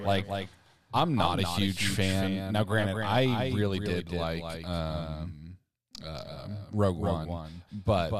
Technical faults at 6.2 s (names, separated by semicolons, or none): doubled audio track